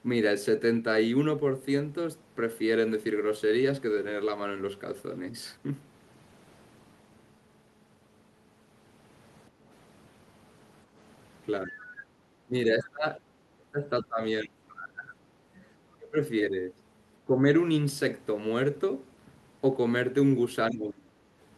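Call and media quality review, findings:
Background gated by the echo canceller, 9.5–9.65 s and 12.11–12.18 s: room tone dips about 8 dB briefly while far-end playback is active. Canceller clamps the mic, then releases.

Speech suppressed in double talk, 11.65–11.83, 12.46–15.34, 15.97–16.22, 17.25–17.47 and 20.7–21.29 s: the talker's voice drops by roughly 10 to 30 dB, with the longest stretch near 2 s. Likely the echo canceller mistaking near-end speech for echo during overlap.

Other side's voice leaking through, 15.6–15.95 s: a faint second voice, around 30 dB under the talker. Likely residual loudspeaker echo not fully removed from the mic.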